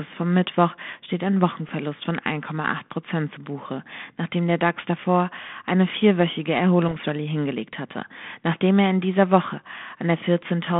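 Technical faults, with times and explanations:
6.85 to 6.97 s, bit errors on an ADPCM link: roughly 0.3% flipped bits derail the decoder's step size and predictor, producing pops and a rough burst with brief level jumps.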